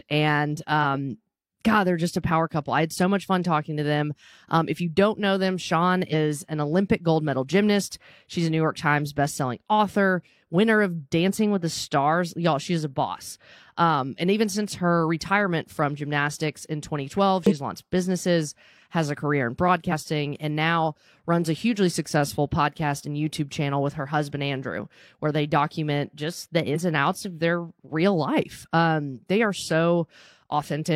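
Short chirps and blips break into the speech at 0.79 s, from 6.09 to 6.14 s, from 17.47 to 17.53 s just before "launched businesses has a", from 19.88 to 19.92 s between "has a career in" and "and now runs a", and from 26.71 to 26.76 s between "they document just the" and "and outs of their". Each is damaged data in a compressed stream: corrupted bytes make the decoder misread frames and lose sync until it finds the next frame header.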